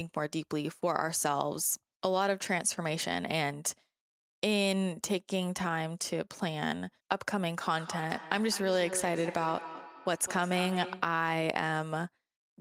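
Speech, and from 7.77 to 11.23 s it carries feedback echo between two devices: each syllable returns roughly every fifth of a second, thinner and more ringing on each pass, peaking about 11 dB below the voice. That fixed, regular spacing with progressively band-limited, metallic repeats separates it from room reverberation, which smears smoothly rather than recurring. It comes from a second device in the room replaying this microphone's signal, which gets picked up again beyond any single echo canceller's reach.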